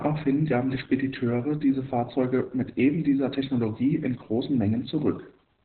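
From start to finish the speech carries heavy Opus voice compression damage. Nothing survives above about 4.2 kHz, so everything sounds boxed-in and phone-like, which points to the codec dropping to narrowband SILK mode. The excitation is coded coarsely too, giving the voice a hoarse, slightly robotic buzz. That combination fits a very low bitrate, somewhere around 8 kbps, where the linear-prediction coder is starved of bits.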